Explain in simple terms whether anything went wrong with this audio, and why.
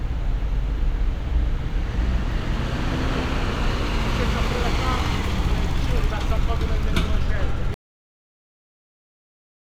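Something did go wrong near the end. At 7.74 s the sound stops abruptly, mid-sound, and the rest of the clip is dead silence. This is a cut-off end. The final stretch of audio was never saved or played, so nothing fades away naturally.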